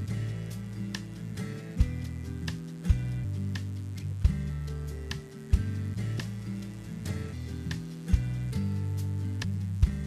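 A steady, raspy mains buzz runs throughout, about 25 dB below the signal: switching spikes on 60 Hz mains add harmonics reaching several kilohertz. Compressed frames are skipped at 2.02, 3.23, 6.18 and 9.43 s, jumping ahead roughly 200, 700, 200 and 400 ms, consistent with 23.2 ms frames.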